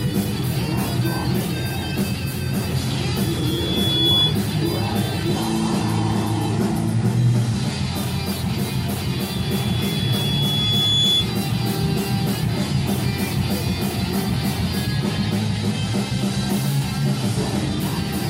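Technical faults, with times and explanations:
3.20–4.40 s and 9.11–11.30 s, loudspeaker feedback squeal: the microphone picked up its own loudspeaker, pushing loop gain above one at 3.4 kHz so that frequency fed on itself; a pure tone swells over about one, then two, seconds to roughly 5 dB above the audio.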